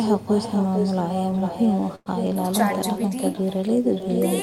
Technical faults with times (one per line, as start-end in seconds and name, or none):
0.00-4.42 echo with no canceller
1.95-2.08 call audio freeze